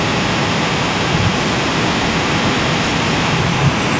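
A speech clip with an echo leak from start to finish, 0.0 to 4.0 s. A delayed copy of the voice trails it by about 0.18 s, only slightly quieter than the speech. Likely cause: a speakerphone whose echo canceller let the far end's audio back through.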